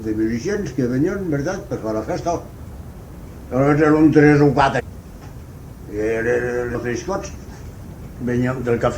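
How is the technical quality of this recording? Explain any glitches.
The recording has three glitches, all compressed frames skipped, at 4.79 to 4.81 s, 6.74 s and 7.85 s. At each point the audio jumps forward, losing roughly 300 ms, 150 ms and 200 ms of sound. The jumps come in whole blocks, which fits a frame length of about 23 ms. Unlike a dropout, nothing falls silent: the sound simply continues from a later point.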